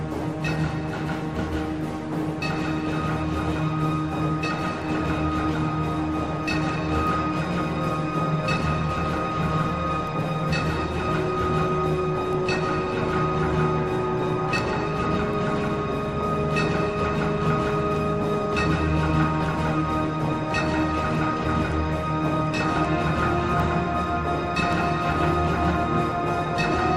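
Word clock ticks run from 0.31 s to 26.61 s: sharp ticks of uneven strength recur about every 0.4 s, roughly seventy in all. The receiver's clock, unlocked, drifts around 50 ppm from the sender's, so each slip drops or repeats one sample.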